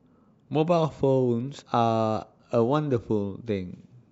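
At 1.61 s the speech jumps ahead by roughly 50 ms, consistent with about two 26.1 ms frames being skipped. These compressed frames were never decoded. The waveform shows a discontinuity at the join.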